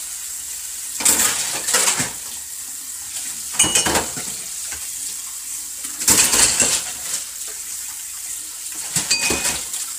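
From start to finish, the sound is rough and grainy. A hiss-like noise fills the gaps between tonal components. The top band is dull, or has a synthetic edge. The damage is heavy. The likely cause is low-delay AAC compression, the AAC-ELD codec of video calls. Its frames of about 10 ms resolve harmonics poorly and use up bits quickly. The coarseness fits a low bitrate, around 24 kbps.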